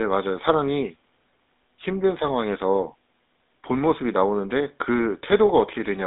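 Throughout, a GSM full-rate codec squeezes the speech into a 200 Hz to 3.7 kHz band, leaving it dull, with a plainly buzzy, gravelly roughness.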